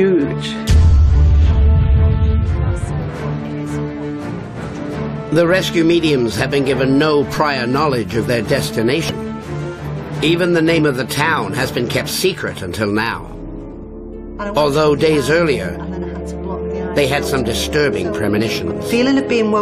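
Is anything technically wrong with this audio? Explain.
Yes. Compressed frames are skipped twice, at 9.09 to 9.11 s and at 18.38 to 18.40 s. Whole frames of the encoded audio never reach the output, so playback jumps forward, by roughly 70 ms the first time and about 20 ms the second. A waveform shows an abrupt change in shape at each point, and a spectrogram shows a narrow vertical smudge where the sound steps ahead.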